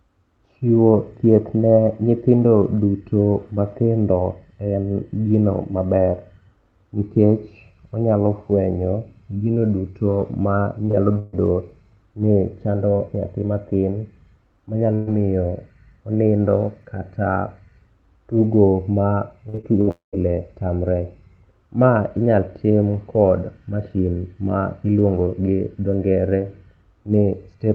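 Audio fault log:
10.85–11.35 s and 19.49–19.89 s: repeated packet loss (robotic sound), four gaps per span (longest 137 ms and 58 ms), each patched by extending the preceding sound, giving choppy audio with pieces missing.
14.95–15.09 s: burst of packet loss, about 120 ms missing; the last sound is stretched and faded across the hole, then audio resumes further on.
19.91–20.15 s: likely a long network dropout; the sound is extended briefly, fades into about 130 ms of silence, and roughly 220 ms of audio never returns.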